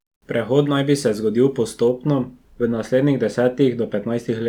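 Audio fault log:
1.88–4.48 s, de-emphasis applied wrongly: a treble-cut stage intended to reverse pre-emphasis was applied to speech that carried no such boost, or the correction ran a second time, so nothing offsets it. The response falls away smoothly above the midrange, sitting about 10 dB lower at 10 kHz than at 1 kHz. From 1.88 s to the end the speech turns dull and muffled, with consonant detail and air noticeably softened.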